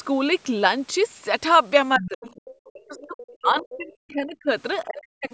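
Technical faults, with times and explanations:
1.98–2.19 s, 2.65–3.17 s, 3.36–4.49 s and 4.84–5.34 s, speech suppressed in double talk: the speech sinks by about 25 dB at first, then up to about 40 dB, for stretches of up to a second. This fits suppression, likely an echo canceller turning down everything while both sides talked, not a dropout or gating.
2.04–2.41 s and 3.19–3.34 s, other side's voice leaking through: a second voice enters at about 15 dB and then about 20 dB below the speech. It is likely loudspeaker echo left in the microphone signal. Because it is an added voice rather than a loss of level, it differs from the suppression dips near it.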